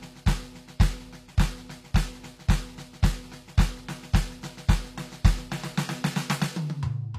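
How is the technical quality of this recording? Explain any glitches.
The quality is held back by plainly audible codec damage across the whole music clip, and it sounds most like HE-AAC compression. The treble doesn't sound genuine. It's gritty and metallic, and nothing comes through above about 14.9 kHz. That's likely spectral band replication at work: the codec spends its bits on the lower spectrum and fakes the top by copying lower bands upward under a rough envelope. The harmonics don't line up across the crossover, which fits a low bitrate around 24 kbps.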